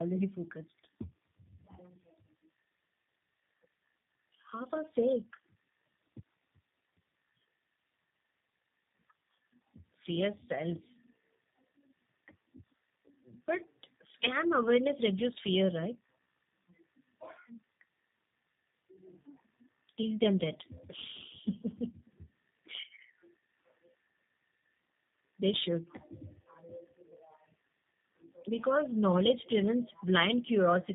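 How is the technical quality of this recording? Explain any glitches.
The quality is clearly degraded for the whole clip by tandem speech coding. The speech passed through two low-rate speech codecs in a row, likely AMR-NB and then G.729A. The second coder re-encoded the first one's already damaged output, compounding the errors. The result is rough, muffled and warbly. A spectrogram shows nothing above 3.8 kHz and smeared, wavering harmonics.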